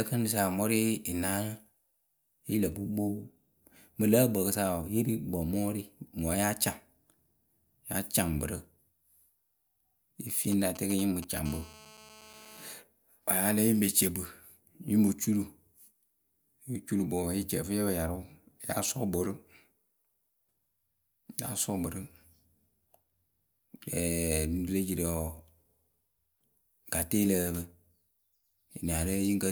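From 10.52 to 11.39 s the speech is interrupted by GSM signalling bursts: a galloping dit-dit-dit of short buzzes, roughly 15 dB below the speech. A nearby 2G handset is exchanging brief control transmissions with the network, and the audio circuitry rectifies each radio burst into the signal path. Within each group the pulses repeat at about 217 Hz, the GSM frame rate, which gives the buzzy fragments their pitch.

At 11.46 s the pattern changes to a continuous GSM phone buzz that runs until 12.73 s. The handset has moved into an active call, so it now transmits its 217 Hz burst train without gaps, and the rectified pulses produce a hard, raspy tone at that fundamental with a dense stack of harmonics. The buzz sits at about 22 dB below the speech and bears no relation to what is being said.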